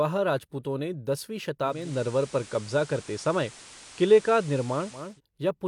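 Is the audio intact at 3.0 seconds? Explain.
No. At 3.0 s the radio is in a digital radio blending to analogue span (1.62–5.21 s, after "राजपूतों ने दसवीं"). A 326 ms crossfade to FM brings hiss roughly 20 dB down and a shift of about 2 dB. A spectrogram shows a raised noise floor.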